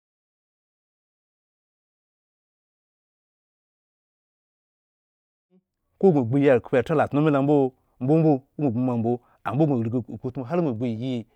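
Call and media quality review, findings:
Nothing to flag on this speech clip, just a gentle, intentional-sounding fade-in that brings the level up from around five and a half seconds to full by 6.25 s.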